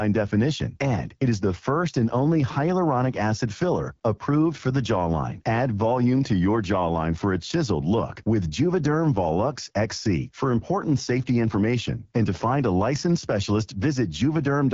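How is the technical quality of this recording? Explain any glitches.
The quality is fairly poor: the whole clip carries AMR wideband (HD Voice) codec damage. The speech sounds rough and raspy, which fits one of the lowest rates, around 8.85 kbit/s, and nothing reaches past about 7.4 kHz, with the top band filled by shaped noise.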